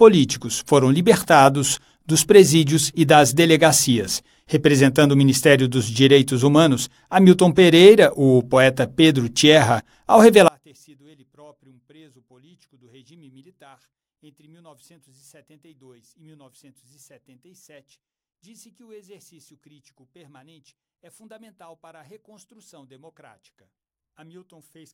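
One channel inverted, from 10.48 s to the end: the summed sound drops by about 35 dB, leaving only a faint remnant. The likely cause is one stereo channel flipped in polarity, so material common to both channels cancels when combined.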